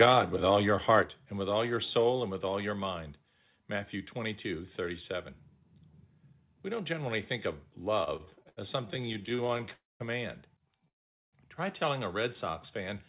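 A speech recording that passed through a telephone-band call path, with nothing above 4 kHz, which points to G.711 mu-law at 64 kbps. The microphone input gain was likely set too high, so peaks hit the converter's ceiling. This microphone overload clips the tops of the loudest parts at 0.00–0.19 s (about 6 dB over, roughly 5% of samples flattened), 0.52–0.54 s (about 1 dB over) and 0.89–0.99 s (about 2 dB over, just before "and with all your"), giving a harsh, crackly edge. Likely in response, the call software stepped the microphone volume down in single jumps at 0.03 s (about 3 dB), 1.02 s (about 5 dB) and 2.04 s (about 1 dB), so voice and background drop abruptly, the largest step coming right after a distorted peak. From 8.04 to 9.69 s, packets kept arriving late and the jitter buffer ran dry over and over, causing repeated stalls (stutter). 27 short holds, the longest 77 ms, stretch about a quarter of that span, so the speech drags and judders though nothing is lost. 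Two call audio freezes follow, likely from packets held up in transit. At 9.73–10.02 s (267 ms) and 10.88–11.35 s (447 ms) the last sound is continued briefly and then falls silent for most of the wait before speech resumes where it stopped.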